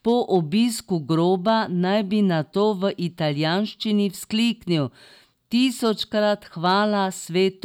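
A stage in the chain overloaded on speech peaks, producing hard clipping: peaks beyond its limit were cut flat, adding harsh upper harmonics heard as brief crackle. It occurs at 0.08–0.37 s, 1.48–1.50 s just before "naj bi nato", 2.61–2.87 s between "naj bi nato" and "italijanščini vzkliknil", 5.63–5.91 s, and 6.66–6.72 s. The overload is slight, about 0 to 2 dB, so the distortion is a rasp on loud moments rather than continuous fuzz.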